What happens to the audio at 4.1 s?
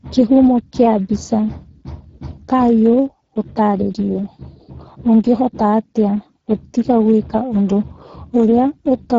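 At 4.1 s the speech carries Speex codec damage that runs through the whole clip. Starved of bits for its excitation, the CELP coder leaves speech plainly hoarse and noisy, which fits a rate near 10 kbps. Unlike a plain low-pass, the band above 4 kHz is a shaped noise fill, ending near 7.7 kHz.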